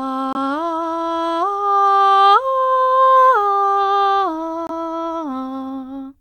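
Bluetooth dropouts at 0.33 to 0.37 s and again at 4.67 to 4.71 s cut brief holes into this music clip, each roughly 40 ms of silence before the music carries on as if it had kept playing underneath. The cause is likely a wireless link losing a packet before it reached the headphones, so the output went quiet until the next good one arrived; the missing span fits a single lost frame of about 23 ms.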